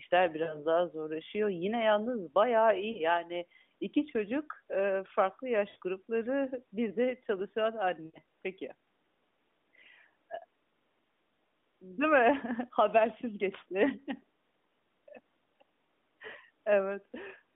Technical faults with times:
0.44-0.66 lost AMR speech frames
2.92-3.03 lost AMR speech frames
5.70-5.77 lost AMR speech frames
8.06-8.19 lost AMR speech frames

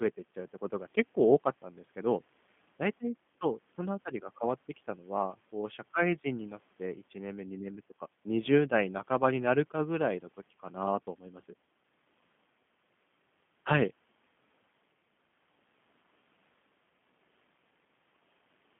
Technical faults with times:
0.00-18.79 G.729 codec

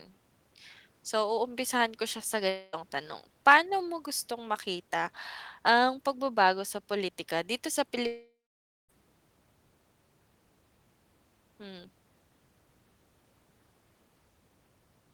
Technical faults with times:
2.49-2.75 long network dropout
8.07-8.90 long network dropout

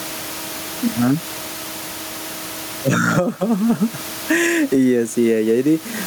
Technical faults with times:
0.00-6.07 gain pumping

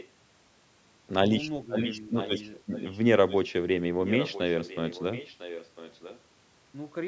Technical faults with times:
0.00-0.10 echo leak
2.15-3.00 echo leak
3.28-3.39 echo leak
4.04-6.20 echo leak

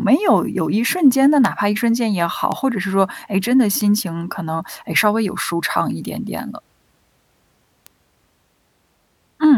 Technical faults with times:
1.45 bit error spike
2.52 bit error spike
3.81 bit error spike
4.99 bit error spike
7.86 bit error spike

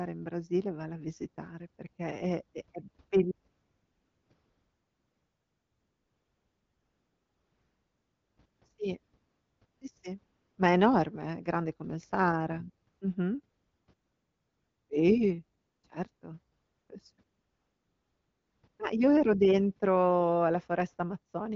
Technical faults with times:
3.51-8.61 AMR comfort noise
9.03-9.81 AMR comfort noise
10.23-10.57 AMR comfort noise
12.89-13.01 AMR comfort noise
13.45-14.89 AMR comfort noise
15.59-15.83 AMR comfort noise
16.15-16.21 AMR comfort noise
16.57-16.89 AMR comfort noise
17.15-18.79 AMR comfort noise

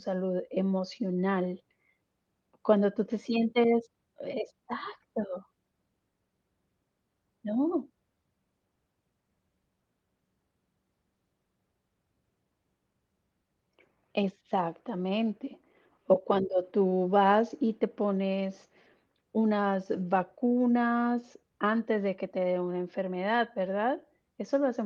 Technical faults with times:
none

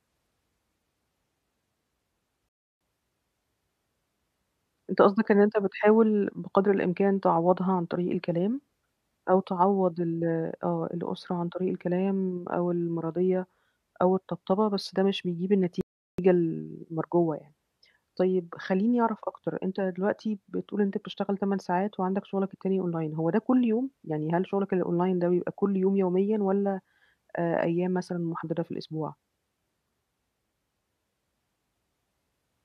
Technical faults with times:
2.49-2.81 rebuffering stall
15.81-16.18 rebuffering stall

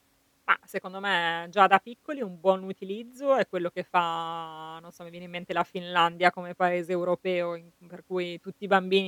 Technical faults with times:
none

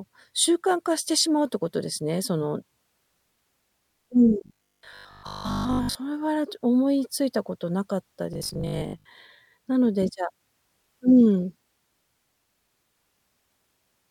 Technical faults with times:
4.41-5.97 robotic sound from repeated short buffers
8.33-9.05 robotic sound from repeated short buffers

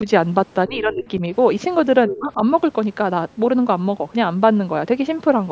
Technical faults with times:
0.68-1.22 speech suppressed in double talk
2.08-2.19 other side's voice leaking through
2.09-2.37 speech suppressed in double talk

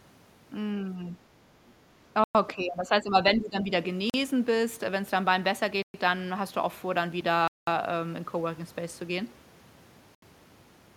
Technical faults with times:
2.24-2.35 Bluetooth stall
2.55-3.70 speech suppressed in double talk
4.10-4.14 Bluetooth stall
5.82-5.94 Bluetooth stall
7.48-7.67 Bluetooth stall
10.15-10.22 Bluetooth stall

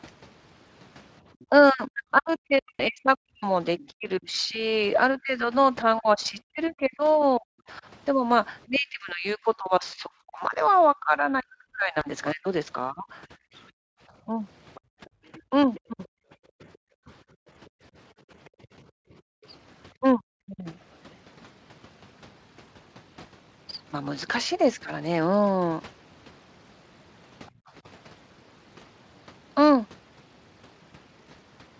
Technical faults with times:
1.40-1.45 other side's voice leaking through
1.49-17.10 speech suppressed in double talk
2.76-2.82 VoIP packet loss concealed by the speech codec
6.66-7.24 other side's voice leaking through
11.99-12.05 VoIP packet loss concealed by the speech codec
13.71-19.45 background gated by the echo canceller
14.74-16.78 other side's voice leaking through
19.99-20.67 speech suppressed in double talk
27.51-27.73 background gated by the echo canceller

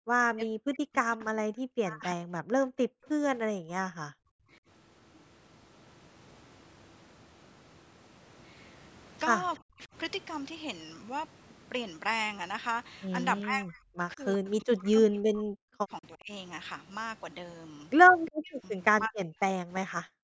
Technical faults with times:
0.00-3.08 speech suppressed in double talk
3.55-3.69 background gated by the echo canceller
4.09-4.13 background gated by the echo canceller
4.41-4.52 speech suppressed in double talk
9.60-9.95 speech suppressed in double talk
13.43-16.31 speech suppressed in double talk
18.25-18.54 echo leak
18.31-20.21 speech suppressed in double talk

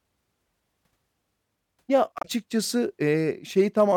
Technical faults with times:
2.18-2.25 damaged data in a compressed stream
3.80-3.83 hard clipping

